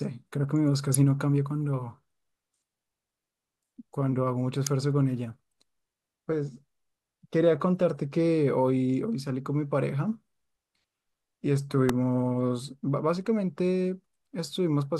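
Three sharp snaps cut through the speech, at 0.95 s, 4.67 s and 11.89 s, each over in a millisecond or two and peaking at roughly -10 dBFS. They sit on top of the audio rather than replacing it, which points to an electrical switching spike, most likely a nearby switch, motor or static discharge arcing briefly and getting picked up on the audio line.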